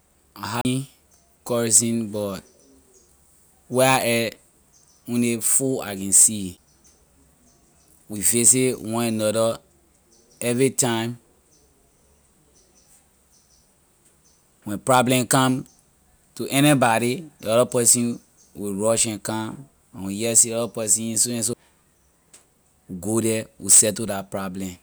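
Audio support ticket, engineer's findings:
CD skip in speech at 0.61–0.65 s, 6.57 s and 21.53 s: tick, a brief mute of about 40 ms then a few ms, then playback resumes from another spiral turn. Waveform shows a gap with a step discontinuity. Spectrogram shows a thin broadband vertical stripe at each jump.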